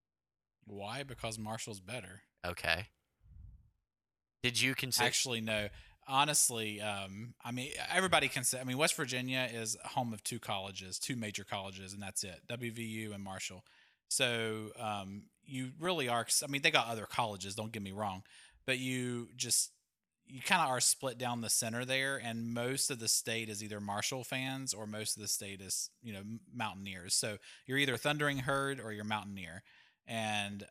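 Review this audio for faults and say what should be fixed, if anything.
Clock drift buffer slips, 0.32 s to 30.53 s: a regular click about every 0.87 s through the speech, roughly forty in all. Two devices on separate clocks, likely a few hundred ppm apart, let the buffer drift until a block of around fifteen samples is dropped or repeated. Lock both devices to one shared clock, or resample adaptively at the buffer between them.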